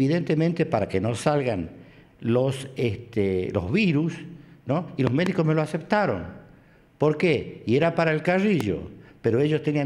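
Three loud pops break through the sound: a pair in quick succession between 5.07 and 5.29 s, and a single one from 8.60 to 8.63 s, each peaking around 15 dB above the surrounding level while the audio continues underneath. On a waveform they appear as tall, narrow spikes; on a spectrogram, as thin vertical bands spanning the full frequency range. The likely cause is a brief voltage step, such as from a plug, switch, static or driver glitch.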